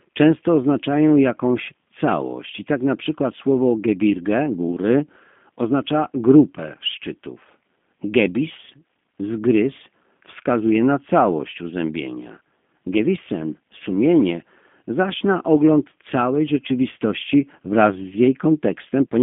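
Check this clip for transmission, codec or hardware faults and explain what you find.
G.729 codec damage runs through the whole speech clip. Each 10 ms frame is rebuilt from a vocal tract model, pitch prediction and sparse pulses, fitting an 8 kbit/s stream. The result sounds rough and synthetic, confined to a 200 Hz to 3.5 kHz line band with nothing above 3.6 kHz.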